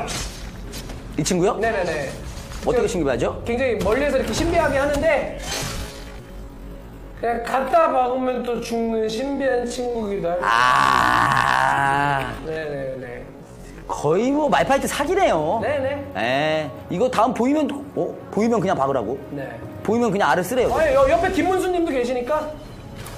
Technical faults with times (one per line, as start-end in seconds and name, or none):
5.36-14.49 time-stretched section